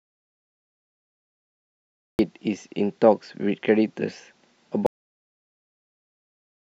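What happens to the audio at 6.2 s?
At 6.2 s there is only digital silence: a cut-off end begins at 4.86 s and runs to the end of the clip. The final stretch of speech was never written out, so the sound stops mid-utterance with no decay. The waveform goes flat and the spectrogram is blank after a sharp vertical edge.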